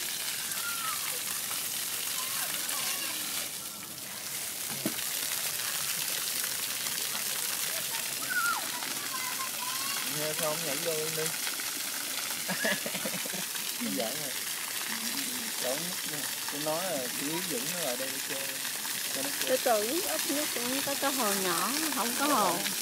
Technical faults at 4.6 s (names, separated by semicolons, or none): none